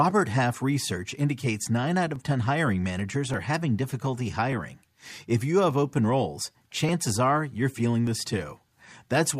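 Speech clip with clock drift buffer slips. From 0.97 s to 9.26 s, a brief click sounds every 1.18 s, about seven in all. The likely cause is two mismatched clocks, off by roughly 0.1 percent, forcing the buffer to drop or repeat a few dozen samples each time.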